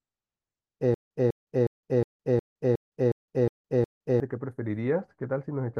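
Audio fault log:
0.94–4.20 s, stutter with silent gaps: the same 197 ms scrap of speech repeats nine times at a steady 362 ms pace, with 165 ms of dead silence between. Likely a stalled stream replaying its last fragment on each retry, so the speech that belonged there is lost.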